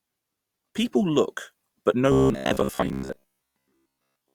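Speech clip; from 2.12 s, after "look but no", to 4.34 s it turns to robotic sound from repeated short buffers, a rigid 66.8 Hz buzz, likely from roughly 15 ms buffers looping most of the time.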